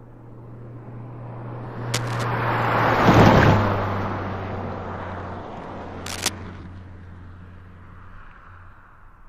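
A burst of dense, uneven scratching sits over the sound from 1.94 to 2.25 s, about 10 dB below it. A louder, shorter rustle follows from 6.06 to 6.29 s, only about 5 dB down. Both are cable scratch noise, likely from a worn cable, connector or control being moved, its contact resistance jumping rapidly and injecting ragged noise into the signal.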